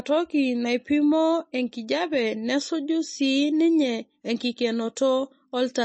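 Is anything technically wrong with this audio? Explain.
Yes. Throughout the speech the treble stops dead at about 8.3 kHz, leaving the sibilants dull, and the whole recording has a watery, swirling quality with smeared consonant onsets. This is likely MP3 compression at a starved bitrate, which fits something as low as 32 kbps. With too few bits, the encoder discards everything above a fixed frequency and drops quiet spectral detail that flickers in and out from frame to frame, which produces the warbling texture.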